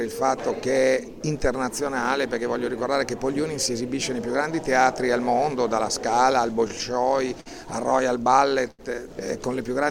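From 6.53 to 7.48 s there are repeated stalls (stutter): the jitter buffer ran dry seven times as packets arrived late, and the receiver extended the last sound each time, 96 ms in total, longest 50 ms. Nothing is lost, but the audio drags and hiccups.

At 8.71 s a short stall from a late packet occurs: one packet arrived about 81 ms behind schedule, so the receiver held the preceding sound for 81 ms before resuming where it left off. The result is a brief held sound with a slight buzz or dip.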